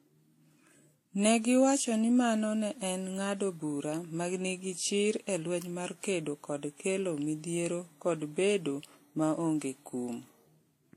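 Throughout the speech, nothing is heard above 16.5 kHz, and two kinds of compression smearing overlap. This points to transcoding between lossy codecs, likely a 64 kbit/s WMA encode re-encoded as 44 kbit/s Vorbis, each adding artefacts while keeping the lowest cut-off.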